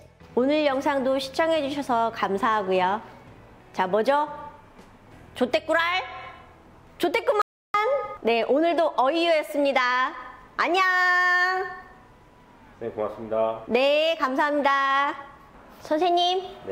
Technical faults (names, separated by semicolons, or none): audio dropout to silence